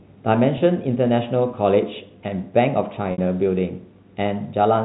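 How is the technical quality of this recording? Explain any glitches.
The recording has two dropouts where packet loss with pitch repetition bridged missing audio, at 0.58 to 0.60 s and at 3.12 to 3.18 s. Both dropouts sit on the band-limited G.711 telephone coding, whose 4 kHz ceiling is audible throughout.

Packet loss with pitch repetition: Data failed to arrive, and the receiver filled each gap by looping the last pitch period of the speech and fading it down. The first gap lasts about 20 ms, which fits a single lost packet, and sounds like a brief, slightly buzzy hold on the voice. The second lasts about 60 ms, roughly three packets' worth. There the repeated period decays toward silence before the speech cross-fades back in.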